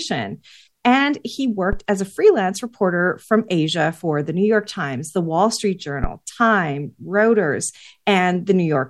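At 1.73 s and again at 6.04 s, a phantom power thump: a supply switching on or off on the live input sends a step through the coupling capacitors, giving deep thuds peaking near -10 and -7 dBFS that die away within about 20 ms.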